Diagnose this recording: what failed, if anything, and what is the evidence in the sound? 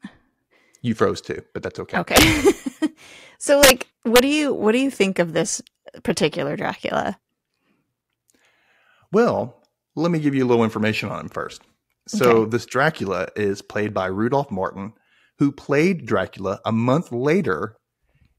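A sample-format or gain stage doing integer arithmetic without saturation caused integer overflow: loud speech peaks wrapped to the opposite sign, producing harsh cracks. They occur at 2.16–2.23 s after "too but that's okay", 3.63–3.70 s (about 6 dB over), 4.16–4.19 s before "do you what do", and 12.24 s before "okay this".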